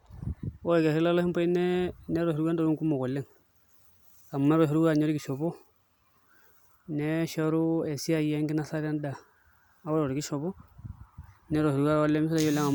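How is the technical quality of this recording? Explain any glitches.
No glitches turn up anywhere in this speech recording. Nothing in it calls for a technical explanation.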